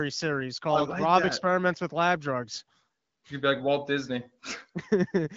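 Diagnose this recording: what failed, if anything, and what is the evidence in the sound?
Nothing failed in this recording.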